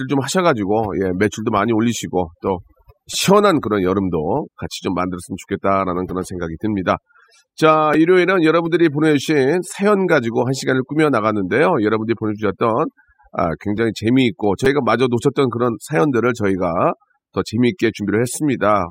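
Overdone noise removal runs through the whole speech clip. The noise reduction was set too strong. Frequency bands that sit near its noise estimate are pulled far down or shut off. Quiet parts of the speech are cut along with them. The background drops and breaks up into twinkling specks.

At 7.94 s there is a repeated buffer. New audio arrived late, so the player sent the same tiny piece out again, twice more. Each repeat is very short, which fits a 5 ms buffer. Three copies back to back with hard joins come out as a brief buzzy click, not a clear stutter. About 10 ms of real audio is lost underneath it.

At 14.65 s the same repeated-buffer fault happens again. It sounds much the same: a short click-buzz, with about 10 ms of audio gone.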